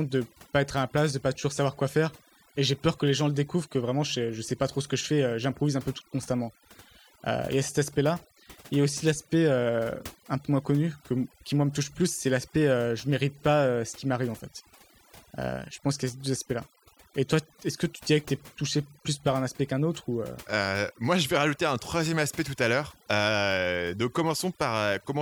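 Overdone noise removal runs through the whole recording. A noise reducer set far too aggressively pulls individual frequency bands down whenever they sit close to its noise estimate, so the background drops and breaks up into twinkling specks, and quiet parts of the voice vanish with it.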